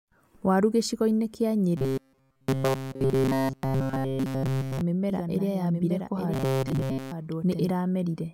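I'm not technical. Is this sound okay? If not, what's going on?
No. From 1.77 to 4.81 s, and again from 6.34 to 7.12 s, there is robotic sound from repeated short buffers. The speech turns into a flat, metallic buzz at 133 Hz. Fresh audio is likely arriving too slowly, so tiny slices of about 7.5 ms are replayed over and over. In the first stretch nearly everything is repeats, and in the second most of it is.

From 5.10 to 7.70 s there is a doubled audio track. A second, slightly quieter copy of the speech plays about one second behind the original, and it starts and stops abruptly. This is likely because the same audio was recorded twice along a slower path and mixed back in.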